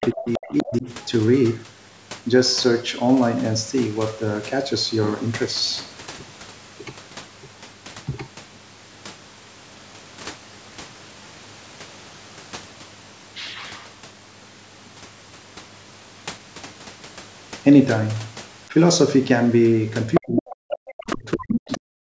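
Speech recording with speech suppressed in double talk from 0 to 0.87 s, 20.19 to 20.81 s and 21.16 s to the end, dipping by about 25 to 40 dB. The likely cause is an echo canceller ducking both voices at once, which shows as sudden waveform troughs and blanked spectrogram bands. The other side's voice leaks through at 0.02 to 0.09 s, 0.27 to 0.78 s, 20.14 to 20.21 s, 20.37 to 21.16 s and 21.52 to 21.78 s, roughly 5 to 15 dB under the talker. This is likely residual loudspeaker echo, visible as harmonic traces overlapping or filling the gaps.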